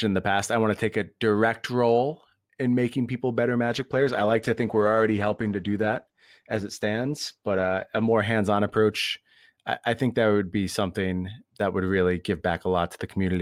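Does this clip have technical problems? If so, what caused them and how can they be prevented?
Yes. From 3.69 s to 8.21 s the speech turns rough and watery, with the top end dulled, before clearing again. This is a call bitrate drop: the call's bandwidth estimate fell, so the Opus encoder was told to spend far fewer bits and coded the speech coarsely, trimming high frequencies. The degradation fits a fall from about 48 kbps to roughly 13 kbps, held for about 4.5 s. A steadier network path, or congestion control that ramps bitrate down more gently, would prevent this.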